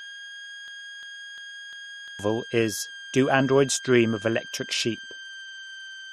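From the start of the speech to its end, a switching supply whistle sits under the audio: a thin, high tone wandering between about 1.56 and 1.64 kHz, roughly 20 dB below the speech. A switch-mode power supply on the recording path is running its regulator at an audible rate, and the drift in pitch tracks the changing load on that supply.

From 0.68 s to 2.19 s there is a broken-record loop. A fragment about 0.35 s long plays four times back to back, identically each time, giving a stuttering, mechanical repetition. The likely cause is a stall in the player, encoder or stream, which kept resending the last fragment it held. Whatever audio should have filled that stretch is missing.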